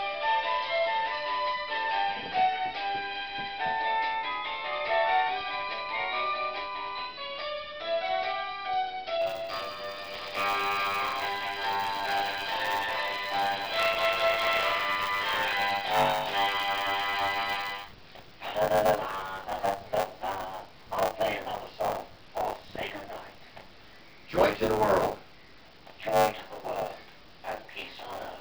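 From 9.21 s to the end, the software writing the ring buffer and the hardware reading it slip out of step, causing buffer tearing. About a third of each 10 ms period replays older audio between hard joins, giving a continuous robotic 100 Hz buzz under sound.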